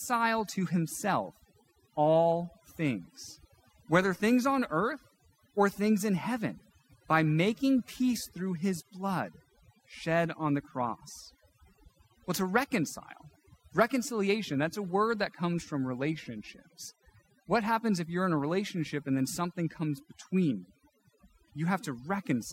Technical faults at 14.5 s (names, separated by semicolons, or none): overdone noise removal